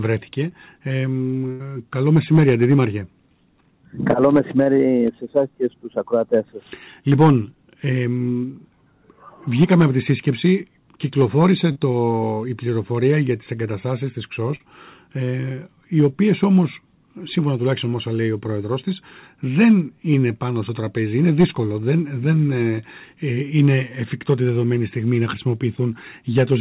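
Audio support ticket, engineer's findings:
Burst of packet loss, 1.52 to 1.62 s. The last sound is stretched and faded for roughly 76 ms, then audio picks up later, with about 80 ms skipped. Several consecutive packets likely lost or late in the jitter buffer. Concealment covered the hole rather than playing silence.

Short concealed packet loss at 4.64 s (about 20 ms), 11.72 s (about 40 ms) and 14.56 s (about 40 ms). Brief smears or wobbles where the decoder extended the preceding sound, then crossfaded back into real audio. Isolated late or dropped packets on the call path. Narrowband, nothing above 4 kHz, fits G.711 A-law.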